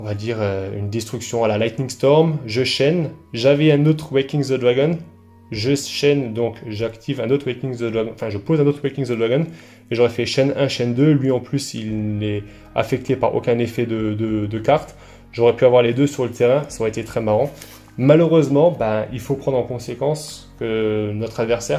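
No technical faults can be heard anywhere in the audio. Nothing in the recording departs from what a normal capture and playback would produce.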